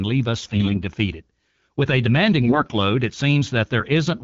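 From 0.43 to 0.80 s and again from 2.42 to 2.74 s the speech shows AMR bit errors. Each stretch fits a run of roughly 16 to 18 consecutive 20 ms frames on the AMR-WB link. Roughly 7 and then 10 percent of the weakly protected bits arrive flipped while the core bits still pass their check. Pulse positions and fine pitch, gain and spectral values are therefore wrong, and pitch and level hold roughly while the sound turns hoarse, scratchy and gargly, worse in the second burst.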